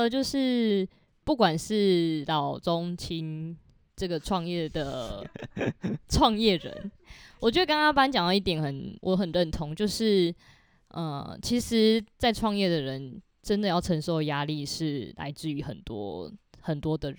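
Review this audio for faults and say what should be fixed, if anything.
Imaging from linear upsampling runs through the whole speech recording. The spectrum suggests a source at 24 kHz raised to 44.1 kHz by drawing straight lines between samples. That interpolation is a poor low-pass filter, so the top of the original band is dulled. A mirrored copy of the spectrum also remains between 12 and 24 kHz, roughly 35 dB below the signal, heard as a faint metallic shimmer on sibilants. Prevent it by resampling with a proper windowed-sinc or polyphase filter instead of linear interpolation.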